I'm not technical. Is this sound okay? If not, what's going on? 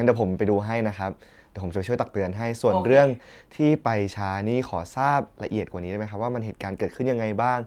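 Yes, nothing in this recording points to a technical problem with how the sound was captured, stored or played back.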